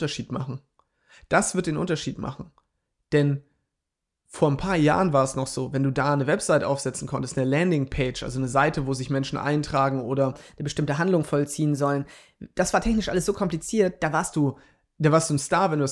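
From 10.32 to 14.28 s the speech runs fast and sounds higher. This is a wrong sample rate fault. Playback runs about 1.09 times too quickly, with no rate conversion. That fits audio made at 22 kHz but played at 24 kHz. Pitch rises about 1.5 semitones.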